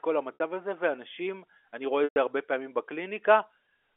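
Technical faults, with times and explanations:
0.34 to 0.40 s and 2.04 to 2.16 s, packet loss with pitch repetition: two gaps of 60 ms and 120 ms, which fit runs of three and six 20 ms packets, are bridged by repeating the last pitch period. The shorter one sounds like a briefly held, buzzy tone. The longer one fades to silence after about 50 ms, and the sound returns through a short cross-fade. Unlike a zero-filled dropout, there is no abrupt hole or click. Unlike a stutter, no whole syllable repeats, only a single pitch cycle. All of this sits within the narrow 300 to 3400 Hz telephone band of G.711 coding.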